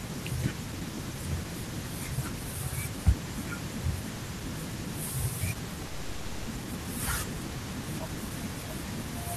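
At 5.87 s the speech breaks off and the last sound is stretched into a buzzy, fading tail that fills the gap for about 0.61 s, with no true silence, before speech resumes at 6.50 s with about 0.4 s of it simply gone. This is likely a long network dropout: packets stopped arriving, the receiver concealed the hole by extending what it last had, and when audio returned the lost stretch was skipped, leaving a delay shift of around a fifth of a second.

From 7.32 s to 9.13 s the speech sounds slightly rushed, running at about 106% speed while the pitch stays unchanged. This is a jitter buffer speed-up. The buffer held more audio than it needed, so the receiver trimmed many tiny pitch-period slices in a row, around a tenth of a second in total, to bring the delay back down. The result is a hurried delivery rather than a raised voice.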